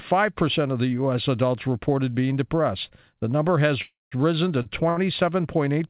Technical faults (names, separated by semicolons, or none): call audio freeze; short stall from a late packet